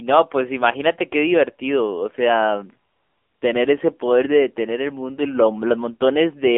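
From the first moment to the last, the speech has been through an AMR narrowband mobile codec. The band runs only from about 250 Hz to 3.5 kHz, so it sounds boxed-in and phone-like, and the codec damage is plainly audible. The voice comes across buzzy and a bit synthetic, which fits AMR-NB's lower 7.4 kbps mode, where the vocal-tract model is driven by very few pulses per subframe.

Then from 2.92 s to 3.42 s there's AMR comfort noise. For half a second the phone decided nobody was talking and stopped sending speech frames, so the receiving end filled the gap with made-up noise built from a rough sketch of the background's level and spectrum. You hear the real background drop out and a smooth, even hiss switch in and then back out again.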